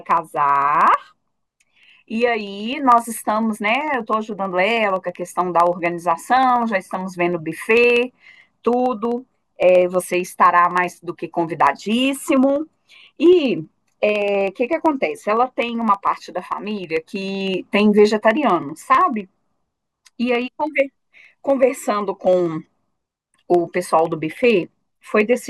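From 0.11 to 25.4 s, periodic USB or driver dropouts skip a sliver of speech every 64 ms, ticking only while sound plays, with a steady rhythm unlike random clicks.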